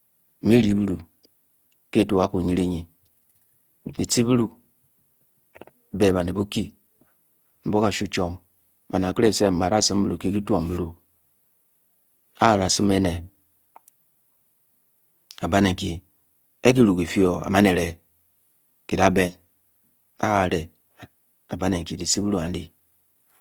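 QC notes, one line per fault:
Throughout, Opus compression: the speech has a plainly audible grainy, rough, noise-tinged texture rather than swirling or hollow gaps. Bandwidth stays full, with content reaching 20.2 kHz. This is likely the codec's music (CELT) mode starved of bits, which fits a rate around 24 kbps. Each band keeps its overall energy, but the detail inside it is filled with folded or noise-like content, so the speech turns rough instead of muffled.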